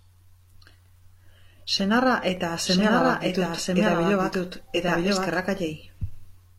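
At 2.37 to 2.41 s, and again at 4.33 to 4.36 s, overlap between stream segments cuts a sliver of speech. Each is a tiny skip, spaced to fit 2-second segments.

From 2.66 to 5.40 s a doubled audio track runs. An equally loud, dry copy trails by about a second, likely from a second, slower capture path, starting and stopping abruptly.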